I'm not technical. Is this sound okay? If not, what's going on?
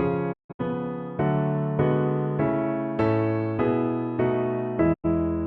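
No. There are two digital broadcast dropouts. From 0.32 to 0.61 s, the sound cuts out in a few short gaps, the longest 160 ms. It drops again from 4.92 to 5.06 s. The receiver lost the signal and muted. That sound is gone.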